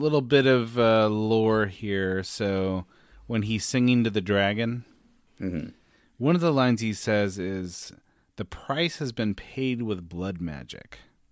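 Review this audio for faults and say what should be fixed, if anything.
Nothing stood out on listening, so there is nothing here that needs fixing.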